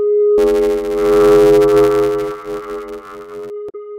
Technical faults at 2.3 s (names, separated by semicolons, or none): buffer tearing